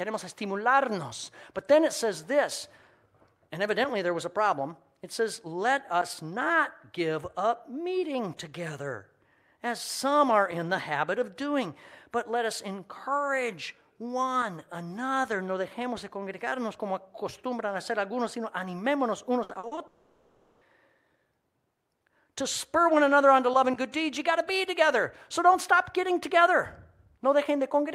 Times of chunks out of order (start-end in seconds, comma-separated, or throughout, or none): none